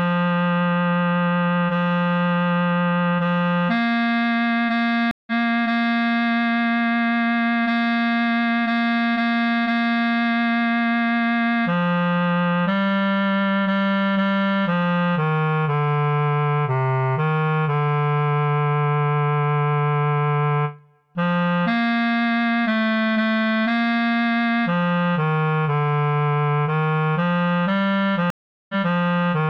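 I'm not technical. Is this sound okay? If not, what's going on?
No. Twice the connection dropped and the player had to reconnect (a stream reconnect). At 5.11 s there's a brief gap, then the sound skips ahead about a fifth of a second. At 28.30 s a longer gap follows, then 0.28 s is repeated.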